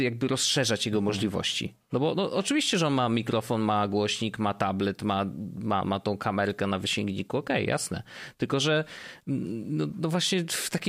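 From 0.10 s to 10.88 s, clock slip clicks make a soft rattle every 40 ms or so. Two unsynced clocks likely differ by about 500 ppm.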